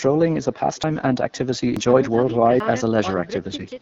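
Throughout the speech, each phrase is trailed by a faint, thin copy arriving roughly 300 ms later and about 28 dB below the original. This is echo with no canceller: the far end's loudspeaker feeds its microphone, and the returning round trip is never removed.

The speech also has a rough, raspy edge throughout, with nothing above 7 kHz. This is the AMR wideband (HD Voice) codec at one of its low rates, which fits 8.85 kbit/s. At that rate, the pulse-driven vocal tract model can no longer render speech cleanly.

At 0.84 s, 1.77 s and 2.60 s, there is an abrupt jump forward in the sound and no gap of silence. Roughly a tenth of a second is missing each time, most likely a dropped buffer (overrun), where samples were overwritten before being collected and the two sides were spliced together.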